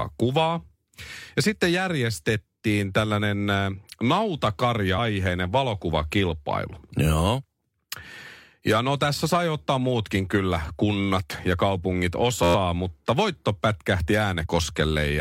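Around 4.97 s there's a case of compressed frames being skipped. The sound jumps ahead by roughly a tenth of a second, which fits about four frames of roughly 23.2 ms each that never made it out of the decoder, either missing or rejected as damaged.

From 12.43 to 12.55 s there's a system hang loop. The machine or driver stalled while the sound hardware kept cycling the same ring buffer, so an 11.61 ms slice plays about ten times back to back. That length fits a 512-sample buffer. Since the loop is so short, it comes across as a steady buzz at about 86.1 Hz rather than a stutter.

The frame skipping comes back at 14.45 to 14.47 s. This time it's around 70 ms gone, which matches roughly three frames.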